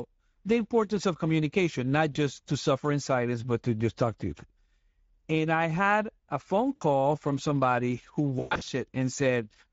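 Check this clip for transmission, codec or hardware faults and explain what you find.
Two faults are audible: Speex coding damage across the whole clip, and three bursts of packet loss concealed by the speech decoder.

Speex codec, throughout: the speech sounds hoarse and grainy, and the top band is a hissy, noise-like fill rather than real detail. This points to a middle Speex setting, near 16.8 kbps, where the CELP excitation gets too few bits to reproduce the waveform cleanly.

VoIP packet loss concealed by the speech codec, at 2.13–2.17 s, 6.75–6.83 s and 8.39–8.68 s: the decoder rebuilds missing audio from its last pitch and filter while lowering the gain, so the sound is stretched into a buzzy tone or coloured noise that fades. The first gap, after "importance of communication not", lasts 20 ms. The second, after "I had a phone", lasts 60 ms. The third, after "from somebody who", loses 220 ms spread across about 280 ms, with the longest run lasting 120 ms. 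Because each frame builds on the previous one, the voice stays weak for a short time after each gap.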